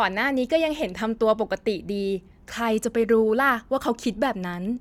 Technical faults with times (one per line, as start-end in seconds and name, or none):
none